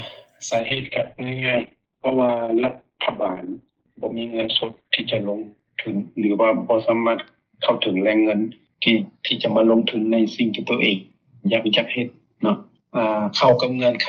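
From 0.63 s to the end, the audio turns rough and watery and loses its top above 4 kHz, a call bitrate drop that fits the encoder falling from roughly 48 to 6 kbps, worst for about 4.1 s. Unlike a plain low-pass filter, the coarse coding grit accompanies the muffling.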